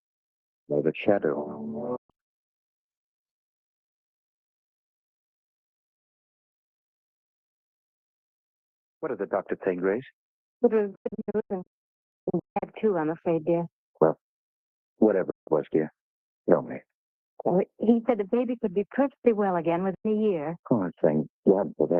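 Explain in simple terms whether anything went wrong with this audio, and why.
The sound keeps briefly dropping out, which is a digital broadcast dropout: the receiver lost good data and went quiet until clean frames came back. It happens four times. Around 1.96 to 2.49 s there's a cluster of short holes. The worst stretch is 10.95 to 12.63 s, where it cuts in and out repeatedly. Then there are single gaps at 15.30 to 15.48 s and 19.94 to 20.06 s. Each cut fades out almost instantly, and whatever played during a gap is simply gone.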